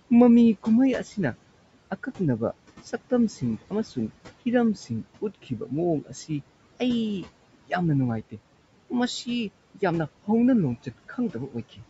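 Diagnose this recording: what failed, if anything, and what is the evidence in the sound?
Noise suppressor artifacts run through the whole recording, from the call processing stage. The steady room noise, sitting about 20 dB below the speech, is pulled down by about 18 dB between phrases and swells back under them, as per-band gains shift frame by frame.

Speech cut by the noise suppressor appears at 5.22 to 5.72 s and 6.01 to 6.30 s, where roughly 200 ms and 150 ms of speech drop by up to about 14 dB and sound swallowed. The suppressor misclassified quiet speech energy as noise and attenuated it with the background.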